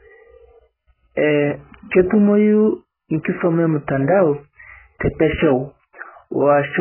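The whole clip of speech carries heavy AAC compression damage: nothing above about 3.1 kHz, so it sounds dull and muffled, with a warbly, fizzy smear on sibilants. That's likely AAC-LC squeezed to a very low bitrate, roughly 8 kbps, stripping bands.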